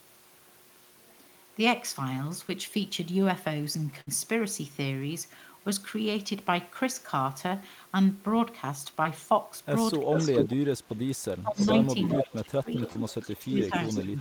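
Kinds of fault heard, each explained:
short concealed packet loss: Around 2.47 to 2.51 s, 9.03 to 9.07 s and 12.93 to 12.97 s, about 20 ms of audio never arrived and the receiver bridged the hole by extending the sound just before it, then blended back in. Each is heard as a tiny smear or wobble rather than a gap. It differs from a burst because it is too short to become a held tone or an audible skip.
burst of packet loss: From 4.01 to 4.09 s a run of audio about 60 ms long was lost. The receiver stretched the preceding sound across the gap, fading it out, and then picked up again further along with that stretch gone. The smear here lasts about 0.06 s, longer than the brief glitches, so it comes across as a short held buzz or hiss followed by a jump, not a momentary tick.
speech suppressed in double talk: From 10.05 to 11.01 s, 11.38 to 11.76 s, 12.17 to 12.81 s and 13.23 s to the end, the talker's level sinks by as much as about 25 dB, with dips, thinning and chopped pieces. 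This is likely an echo canceller clamping down while both sides spoke at once. Unlike packet loss, nothing is smeared or skipped. The audio is turned down, sometimes for most of a second.
echo leak: A delayed copy of the speech, trailing by about 0.4 s, appears from 10.15 to 10.55 s at about the same loudness, from 11.54 to 12.34 s a bit quieter, and from 12.76 s to the end quieter still. This is likely far-end echo that the canceller failed to remove and sent back. It adds a second, lagging version of the sound, whereas double-talk suppression removes level.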